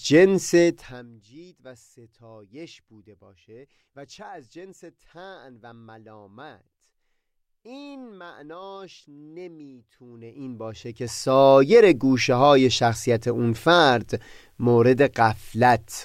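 From 10.04 to 11.47 s, zipper noise: a level change of around 25 dB is applied in hundreds of unsmoothed steps per second, producing audible ticking over the speech.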